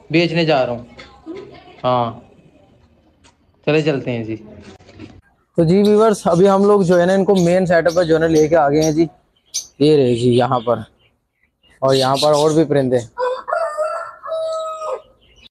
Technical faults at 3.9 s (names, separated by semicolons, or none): none